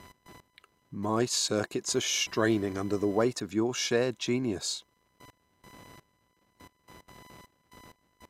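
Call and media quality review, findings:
Computer activity noise throughout: faint buzzing whine around 1 kHz, about 30 dB under the speech, following machine load rather than the talker. Probable component: shared analogue ground; processor, graphics or mouse current swings coupling into the audio input path.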